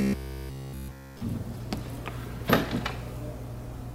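From 0.02 s to 1.21 s the audio has a robotic sound from repeated short buffers: a rigid, metallic buzz at 66.8 Hz replaces essentially all of the real sound. That pitch fits a roughly 15 ms segment repeated while new audio arrives too late, the likely cause.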